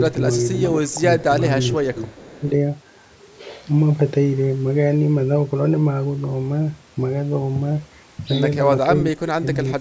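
Short dips of about 5 to 15 dB at 0.13–0.21 s, 0.51–0.77 s and 1.19–1.29 s sound like speech suppressed in double talk. These are likely an echo canceller turning the talker down while the far side spoke. From 1.98 to 2.51 s, a faint copy about 25 dB down trails the speech by 438 ms. This is an echo leak, likely loudspeaker sound that got past the canceller, and its single distinct delay sets it apart from smeared room reverb. Deeper cuts of about 20 dB follow at 8.83–9.57 s and 9.77–9.80 s. Here the sound is pushed down rather than broken by silent gaps as in packet dropouts.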